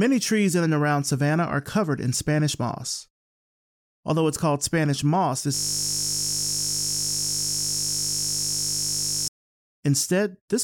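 System hang loop from 5.55 to 9.28 s: the computer or its audio driver froze while the sound hardware kept replaying one 20 ms stretch of its ring buffer, nearly two hundred times, so the sound collapses into a steady, flat buzz at 50 Hz.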